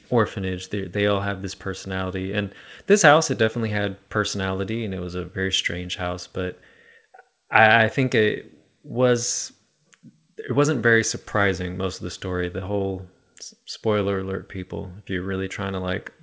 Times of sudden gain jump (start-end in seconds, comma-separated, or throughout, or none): none